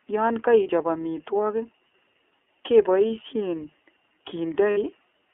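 The speech runs through the iLBC codec for its whole length. Nothing sits below 250 Hz or above 3.4 kHz. Each 30 ms frame is coded on its own, and the sound fits the 13.33 kbps mode. The voice comes out plainly rough and slightly synthetic.

Lost iLBC frames cause two gaps, at 0.63 s and 4.71 s. They last about 30 ms and 60 ms, which fits one and then two missing frames. The decoder repeats the last pitch cycle with added noise. Each gap sounds like a brief buzzy held vowel, and the voice recovers almost at once.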